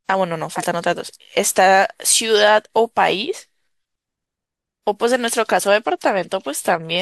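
At 0.52 s a corrupt frame is decoded, lasting until 0.65 s. It spans about three damaged frames and gives a loud burst, peaking near -5 dBFS. Flipped bits made the decoder misread gains and codes. Energy landed at wrong frequencies in the speech. A single bad frame chirps at 2.36 to 2.40 s, somewhat quieter, near -10 dBFS. Another one-frame blip at 5.59 to 5.65 s returns near -5 dBFS.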